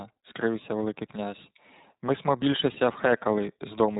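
iLBC codec damage runs through the whole clip, from start to finish. The speech has been squeezed through a narrowband voice codec that rebuilds each short frame's excitation on its own, and the result fits iLBC at around 15.2 kbps with 20 ms frames. Nothing above 4 kHz survives, so the speech sounds muffled and telephone-like. The codec damage is plainly audible as a rough, slightly synthetic texture.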